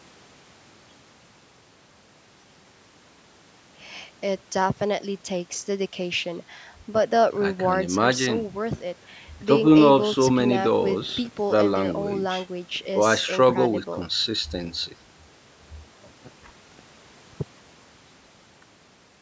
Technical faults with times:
none

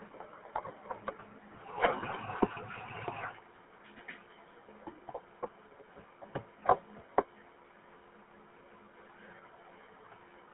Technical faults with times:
0.00-10.54 GSM full-rate codec
3.56-3.61 GSM bit errors

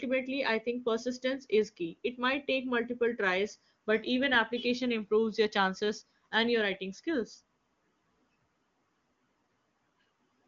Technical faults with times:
none

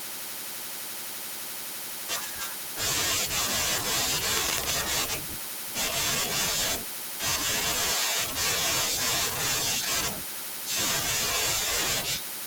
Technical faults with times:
4.37-4.72 cable scratch noise

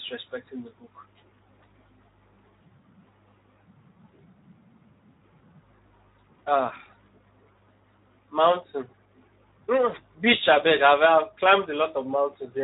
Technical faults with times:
0.00-12.64 Speex codec

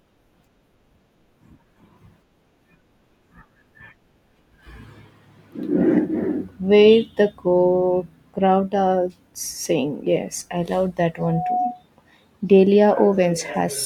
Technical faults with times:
11.18-11.83 loudspeaker feedback squeal

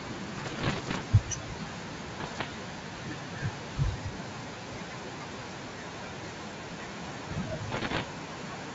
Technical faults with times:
0.00-8.75 noise suppressor artifacts
0.00-8.75 speech cut by the noise suppressor
0.34-1.02 bit errors on an ADPCM link
2.16-2.45 bit errors on an ADPCM link
7.70-8.02 bit errors on an ADPCM link

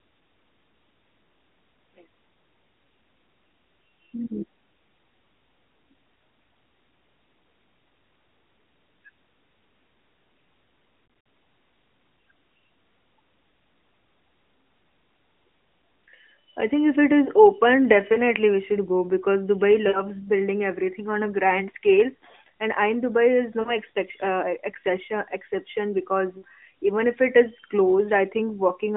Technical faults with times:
11.06-11.26 lost AMR speech frames
18.14-18.19 lost AMR speech frames
19.88-20.03 lost AMR speech frames
23.60-23.77 lost AMR speech frames
26.38-26.43 lost AMR speech frames

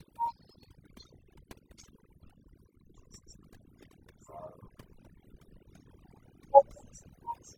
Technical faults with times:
0.00-7.57 overdone noise removal

